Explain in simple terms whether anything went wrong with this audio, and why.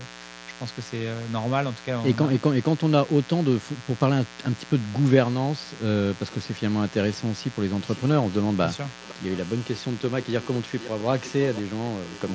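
Yes, a few things went wrong. A steady, raspy buzz runs under the whole recording. That is mains buzz: electrical interference from the 60 Hz power supply, probably from a dimmer or an unshielded cable, leaked into the audio and added a rough hum with sharp overtones.

The background room sound dips away almost to silence from the very start to 2.85 s, again from 5.75 to 6.05 s, and briefly from 7.51 to 7.63 s. This is background gated by the echo canceller: while the loudspeaker was playing, the call software turned the microphone down hard.

From 9.01 s to the end, a faint, delayed copy of the speech follows about half a second behind the original. This is echo leak, most likely because one side played the call through a loudspeaker and its echo canceller did not remove all of that sound from what its microphone picked up.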